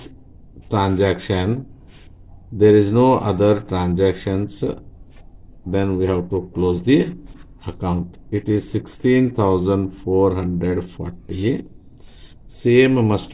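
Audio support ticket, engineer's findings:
No faults found in clip.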